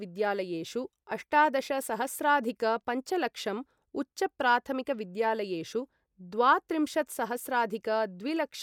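No technical faults can be heard anywhere in this speech.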